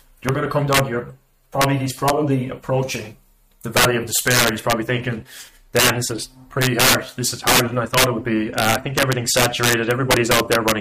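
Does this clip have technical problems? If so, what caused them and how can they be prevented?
Yes: integer overflow throughout, as about 11 dB of overdrive wraps loud peaks, roughly one or two percent of samples, to the opposite sign, giving sharp cracks. Prevent it with saturating arithmetic or a limiter before conversion.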